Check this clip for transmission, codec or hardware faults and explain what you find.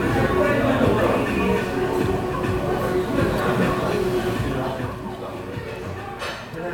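Nothing in the audio stood out as a transmission, codec or hardware problem on listening.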